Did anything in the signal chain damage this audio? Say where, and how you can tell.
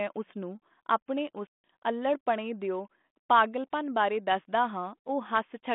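Yes. The damage happened at the network stage: packet loss on an ADPCM call. From 1.47 to 1.64 s the speech drops into a hard-edged, 170 ms hole of silence, which points to roughly fifteen consecutive packets lost. While the gap lasts, the receiving decoder's adaptive predictor and step size stop tracking the sender's. When audio resumes, the decoder has to re-converge before its output matches again. The G.726 link underneath, at 32 kbit/s with a 200 Hz to 3.5 kHz band, adds only light coding damage.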